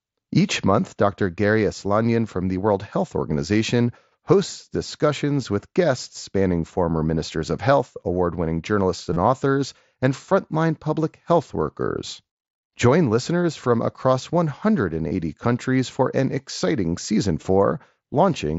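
At 9.13 to 9.16 s, 10.27 s, 15.09 to 15.11 s and 17.41 s there is concealed Bluetooth headset packet loss: missing headset packets were patched by repeating a well-matched recent stretch of waveform. The brief ones nearly vanish. The 30 ms and 22.5 ms runs hold a buzzy tone at full level instead of falling silent like a dropout.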